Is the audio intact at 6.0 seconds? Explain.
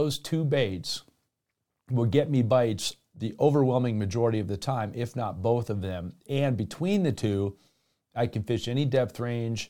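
Yes, at 6.0 seconds the speech is intact, with no fault there.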